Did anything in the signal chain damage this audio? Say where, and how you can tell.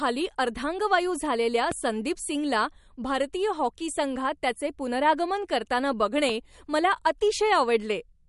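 Yes. The codec stage has left plainly audible damage throughout: watery, swirling artefacts and nothing above 11.2 kHz, the signature of likely MP3 compression at a low bitrate around 50 kbps. Short of bits, the encoder drops weak frequency lines frame to frame and cuts the treble.

Two loud pops sit on top of the speech, which continues beneath them: one at 1.72 to 1.74 s, about 10 dB above the signal, and one at 6.29 to 6.31 s, about 5 dB above. Each is a single sharp transient, likely from a voltage step in the analogue wiring or a driver glitch.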